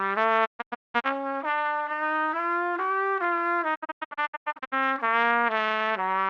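Digital broadcast dropout at 0.44–1.06 s and again at 3.74–4.74 s in this recording of sounds. The receiver mutes through quick 20 ms fades whenever frames fail, leaving scattered silent holes. The longest gaps are 0.19 s and 0.1 s, consistent with 32 ms frames, and the missing audio is gone.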